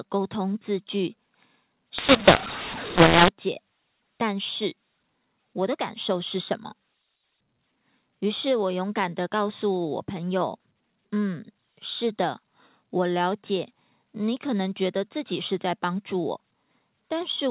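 Telephone-band speech turns harsh and distorted from 1.98 to 3.28 s, with pauses filling with noise: a mu-law and A-law mix-up, where A-law samples were decoded as mu-law, scrambling levels and lifting the quietest ones.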